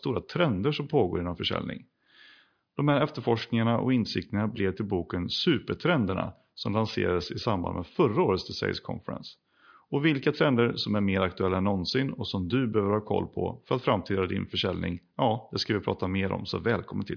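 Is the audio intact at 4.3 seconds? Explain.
Yes, at 4.3 seconds the audio is intact, with no dropout, click, distortion or other fault to be heard.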